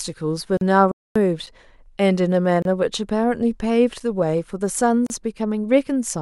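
It's a speech clip with three kinds of dropout. There are gaps at joins of encoded pieces at 0.57–0.61 s, 2.62–2.65 s and 5.07–5.10 s, roughly 30 to 40 ms each, where separately encoded segments were butted together with their encoder delay and end padding left in. A playback stall cuts the sound from 0.92 to 1.16 s, about 240 ms, most likely the player running dry of data or its thread getting blocked. Short gaps between chunks, about 6.5 ms each, land at 1.46 s and 4.00 s, spaced roughly 2.5 s apart, which fits silence left at each chunk boundary during delivery.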